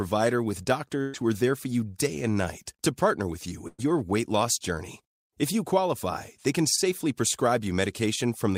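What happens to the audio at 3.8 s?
At 3.8 s there is a burst of packet loss, running from about 3.68 to 3.85 s, between "to partner with you" and "weight loss journey". Roughly 100 ms of speech never arrived, so the receiver stretched the last sound over about 108 ms, fading it into a held buzz before the speech jumps ahead. On a spectrogram the harmonics flatten into frozen horizontal bands that dim, then break off abruptly; the waveform shows a repetitive, shrinking stretch.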